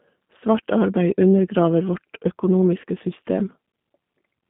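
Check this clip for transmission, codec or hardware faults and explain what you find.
Two faults are present: a low-rate speech codec across the whole clip and one brief dropout repaired by the decoder.

G.729 codec, throughout: the speech is rebuilt from a vocal tract filter, a pitch predictor and a few pulses per frame, which fits 8 kbit/s G.729A. The band runs only from 150 Hz to 3.6 kHz, and the voice sounds plainly rough and synthetic.

VoIP packet loss concealed by the speech codec, 2.82 to 2.84 s: about 20 ms of audio went missing, consistent with a single lost packet. The decoder extended its last pitch and filter at falling gain, so the sound briefly smears into a buzzy tone or a coloured noise that fades before recovering.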